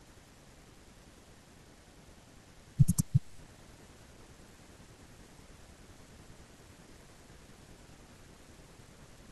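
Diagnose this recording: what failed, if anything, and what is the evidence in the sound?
Nothing failed here; the speech comes across without any break, glitch or distortion that would point to a problem at any stage of the chain.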